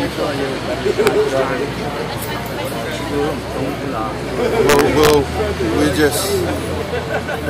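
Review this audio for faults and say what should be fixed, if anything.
Integer overflow appears twice: a single sharp crack at 1.07 s, where the signal ran about 1 dB past the integer ceiling, and a longer stretch from 4.69 to 5.14 s, pushed about 4 dB over. Instead of flattening at full scale, each overshooting peak wraps around to the opposite extreme, so the waveform jumps across its entire range. Clipping sounds like a dull, buzzy squaring of loud moments, but this is a violent snap on every excursion. Fix it by adding saturation or limiting to the summing and gain stages so values are capped rather than wrapped.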